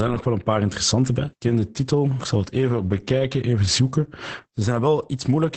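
Throughout, Opus voice compression is working at a very low rate, which fits a bitrate near 10 kbps, with the SILK coder quantising the excitation coarsely. The band stops around 8.6 kHz, so the speech sounds muffled, hoarse and faintly robotic from start to finish.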